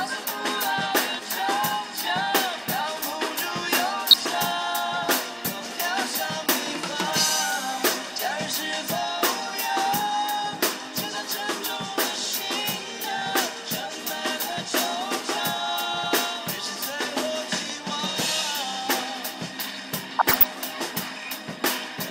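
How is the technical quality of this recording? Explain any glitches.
Two short patches of DAB burbling, at 4.09–4.28 s and 20.19–20.49 s. Weak reception let a fraction of a percent of bit errors through into the MP2 data, so single sub-bands get short blips of noise.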